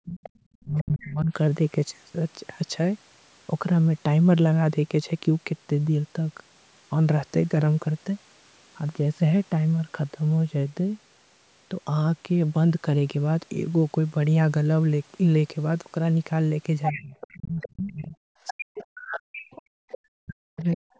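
A speech recording from a call, with band-limited audio that shows no energy above 8 kHz, carrying two related faults that cluster at the start and near the end. Speech suppressed in double talk occurs at 0.04 to 0.21 s, 0.64 to 1.32 s, 16.91 to 19.79 s and 20.16 to 20.89 s. The talker's level drops sharply, by about 25 to 30 dB in the early stretches and about 40 dB later, with some two seconds lost in the long late passage. This is likely an echo canceller that, with both parties talking at once, could not tell the near voice from loudspeaker echo and ducked everything. A waveform shows the envelope pinched down or gapped in pieces, and a spectrogram shows the harmonics fading or thinning at the top. The other side's voice leaking through appears at 0.23 to 0.30 s, 16.83 to 17.73 s, 18.47 to 19.03 s and 19.54 to 19.98 s. A second, weaker voice sits roughly 10 to 20 dB below the talker. 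This is likely residual far-end audio from the loudspeaker that the canceller left in the microphone signal. On a spectrogram it appears as faint harmonic traces.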